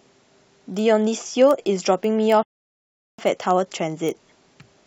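From the start of the speech and running throughout, a block size mismatch (padded) leaves a steady 43.1 Hz buzz. Each block written falls slightly short of what the next stage reads, so a sliver of zeros fills every block. That rate fits a 1024-sample read block, and its rate sets it apart from mains hum. Timing stretches only to 0.999 times normal speed, with timbre unchanged.

From 2.43 s to 3.19 s a rebuffering stall cuts the audio to silence, adding about 0.75 s, as playback waits for more data to arrive. Unlike a dropout, nothing is missing: the speech resumes exactly where it stopped.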